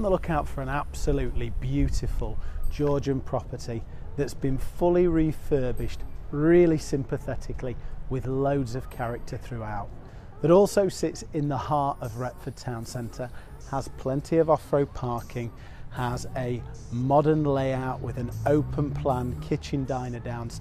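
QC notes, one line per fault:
No faults heard in this clip.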